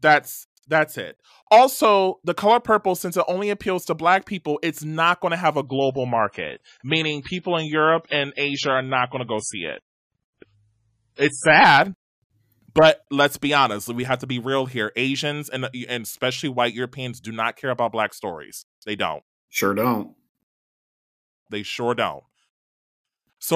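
From 5.64 s to 11.64 s the speech passes through an adaptive stream at a lower bitrate. For six seconds the player evidently fell back to a cheaper encoding after the connection slowed. The sound fits a switch from about 128 kbit/s MP3 to about 24 kbit/s. The treble is cut off above 10.5 kHz, and coding artefacts thicken. Quality changes abruptly at both boundaries, with no gap or dropout.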